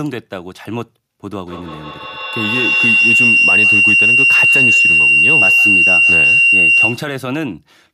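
A microphone-to-loudspeaker loop gains level on every pass from 1.44 s to 7.2 s, causing feedback howl. The repeats grow instead of fading, narrowing to a shrill tone around 3 kHz that pulses roughly every 150 ms and peaks about 10 dB above the speech.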